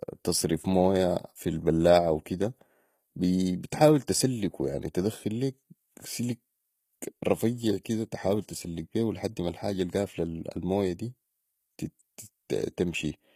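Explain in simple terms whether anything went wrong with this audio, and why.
Throughout, the speech's s sounds come out gritty and metallic, likely from HE-AAC compression, which fakes the treble by copying lower frequencies upward instead of keeping the real ones.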